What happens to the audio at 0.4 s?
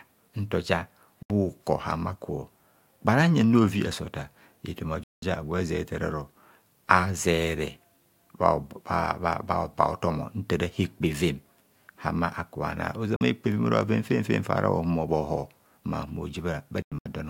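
Nothing goes wrong at 0.4 s; the speech there is intact, with no dropout, click, distortion or other audible fault.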